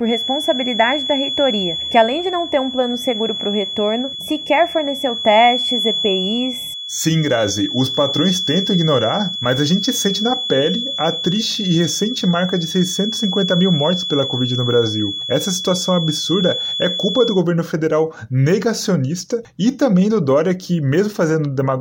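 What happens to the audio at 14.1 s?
At 14.1 s you're still inside a feedback whistle that runs from the very start to about 17.45 s: a thin, steady tone near 3.4 kHz sitting a few dB under the sound and swelling and fading slowly in level. It's likely a speaker-to-mic loop hovering right at the edge of feedback.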